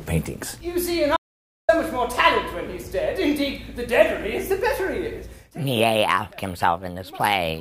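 Audio dropout to silence from 1.17 to 1.69 s: the sound cuts off abruptly and about 0.52 s of silence follows, with no room tone, before it resumes mid-flow. The input was likely lost briefly while recording continued writing silence.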